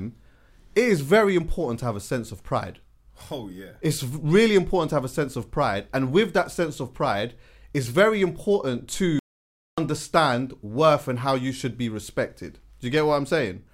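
At 9.19 s, right after "pride it's very important", the speech just cuts out to dead silence for about 0.59 s, until 9.78 s, then picks up again. That's a playback stall: the output went quiet mid-flow because the player most likely ran dry of data or had its thread held up, and nothing reached the output until it caught up. The gap is long enough to sound like the audio froze.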